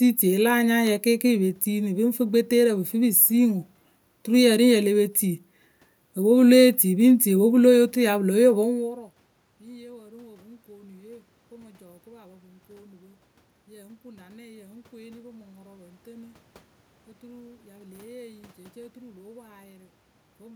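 No technical faults are audible.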